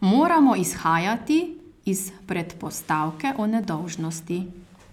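From 1.59 s to 4.66 s, periodic USB or driver dropouts interrupt the speech every 1.02 s, about four times. Something briefly stalls the audio path. Each time, about a millisecond of sound is replaced by silence. The result is a regular tick.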